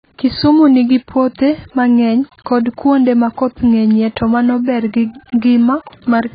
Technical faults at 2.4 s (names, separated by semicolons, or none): AAC compression